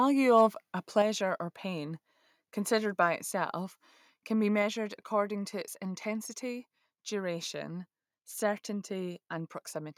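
From 0.37 to 0.42 s, the loudest peak of the speech turns harsh and gritty. It sounds like microphone overload. The likely cause is an input level set too high, so the peaks ran into the converter's ceiling and had their tops flattened. The overshoot is small, about 1 dB, and about 2 percent of the samples in the stretch are cut off. Even so, the squared-off peaks add a brief crackling edge.

At 1.02 s, just before "or pain considered", the whole signal drops in one sudden step of about 5 dB. The voice and the background fall together. This is a microphone volume stepped down. The likely cause is the call software reacting to the clipped peak about 0.6 s earlier by cutting the device's input gain in a single move.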